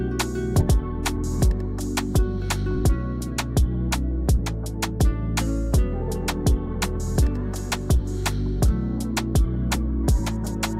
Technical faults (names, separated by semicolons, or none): skip ahead; jitter buffer speed-up